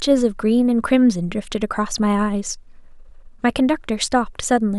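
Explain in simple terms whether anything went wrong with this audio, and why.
Nothing went wrong with this speech recording that a careful listener can pick out. The sound carries on without interruption, and nothing out of place turns up at any moment.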